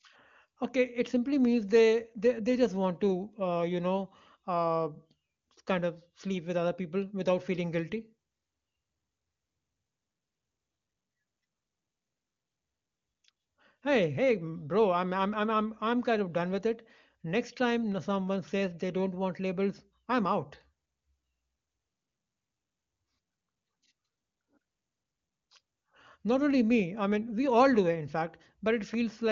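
Nothing goes wrong anywhere in the recording, and the speech comes across the AMR wideband (HD Voice) codec at its top rate of 23.85 kbit/s without any trouble worth pointing out.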